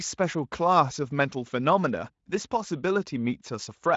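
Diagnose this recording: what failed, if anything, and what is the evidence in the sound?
Nothing failed: the speech has come through a Speex encode at what sounds like a high-quality setting, with the spectrum stopping at about 7.7 kHz and the codec leaving at most a faint trace on the sound.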